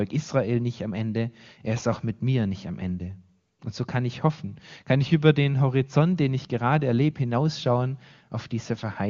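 No technical faults can be heard in the speech, and the AMR wideband (HD Voice) coding keeps it clear up to about 6.4 kHz, which fits the codec running at its top rate of around 23.85 kbit/s.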